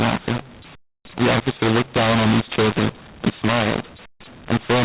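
Throughout, mu-law and A-law are mixed up: A-law samples decoded as mu-law scramble levels, so speech turns harsh and pauses hiss, unlike clipping's clean silences.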